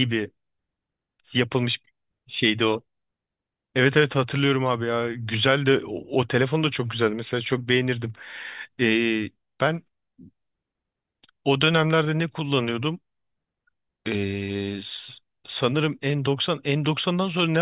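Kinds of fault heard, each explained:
Nothing stood out on listening to this speech clip.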